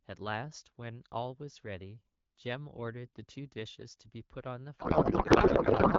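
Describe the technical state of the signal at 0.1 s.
At 0.1 s the speech signal is intact, with no fault present; it is carried through the AMR wideband (HD Voice) codec at a rate that fits about 12.65 kbit/s, where speech stays clear.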